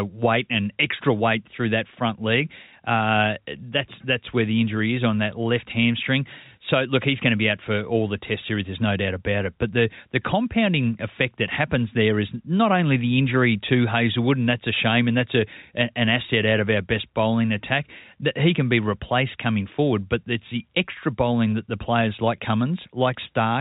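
No technical faults can be heard anywhere in the speech. It has come through a G.711 A-law telephone path, so nothing reaches above 4 kHz, and only a faint hiss that rises and falls with the speech level shows the 8-bit coding underneath.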